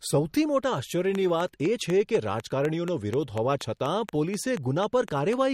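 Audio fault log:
Throughout: MP3 compression. The speech sounds watery and swirly, and nothing is present above 16.3 kHz. This is likely heavy lossy coding at a low bitrate, around 48 kbps.
1.15–5.34 s: train of clicks. Starting just after "સૌથી મોટા", about twenty similar clicks tick at a regular 4.1 per second, also in pauses. They peak roughly 10 dB above the speech. The likely source is interference or a faulty connection.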